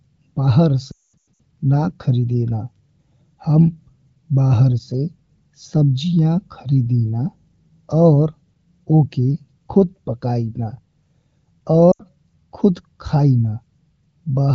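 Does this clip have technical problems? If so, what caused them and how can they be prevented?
Yes. Lost AMR speech frames at 0.91–1.41 s and 11.92–12.03 s: radio errors corrupted frames, so the decoder repeated the last good pitch and vocal tract settings with falling gain. The speech drops to near silence, worst in a 220 ms run. Stronger radio coverage or channel coding prevents this.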